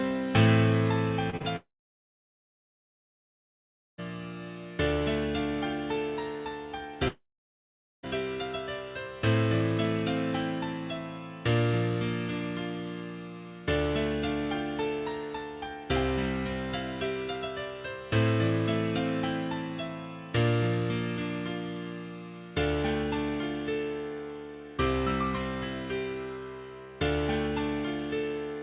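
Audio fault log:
1.30–1.35 s, 1.37–1.42 s and 1.42–1.46 s, short concealed packet loss: 20 to 40 ms gaps are bridged by extending the preceding sound, leaving quick smears rather than any silence.
1.56–4.00 s and 7.08–8.05 s, long network dropout: the sound trails off in a brief fading buzz or hiss, then goes silent for about 2.3 s and 0.83 s, likely from audio never arriving, and resumes later with that span missing.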